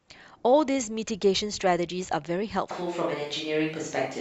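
From 2.71 s to the end, the speech abruptly turns roomy and hollow with thinner bass, likely a switch to a distant microphone; spectrograms show weakened lows and smeared reverberant tails.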